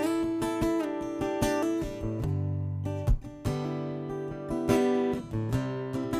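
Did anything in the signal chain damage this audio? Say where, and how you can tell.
No, nothing in the chain has damaged this audio. None of the stages between capture and playback leaves any audible trace on the sound.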